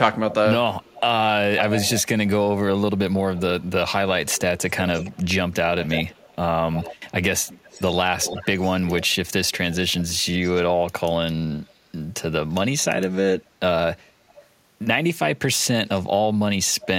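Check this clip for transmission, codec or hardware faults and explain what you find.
A delayed second copy of the speech trails the talker, most clearly from 0.31 to 2.29 s, where it sits only about 5 dB below the original. It returns more faintly from 3.36 to 10.51 s, barely from 11.65 to 13.18 s, briefly from 14.28 to 14.46 s, and again from 15.98 to 16.87 s. The lag stretches from 330 to 352 ms. This is echo leak, likely from a far-end loudspeaker whose echo canceller let its microphone's pickup return down the line.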